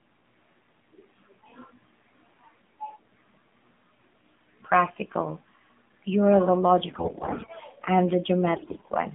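Throughout, the speech carries AMR narrowband mobile codec damage. The band runs only from 150 Hz to 3.6 kHz, so it sounds thin and boxed-in. The low bit budget makes the voice buzzy and synthetic, which fits the 7.4 kbps mode.

AMR bit errors strike from 6.86 to 7.50 s, then again from 8.56 to 8.90 s. Flipped bits scatter the excitation pulses and skew the fine parameters. Pitch and level hold, but the voice turns hoarse, scratchy and gargly. The second burst is harsher, with errors rising from roughly a tenth of bits toward a sixth.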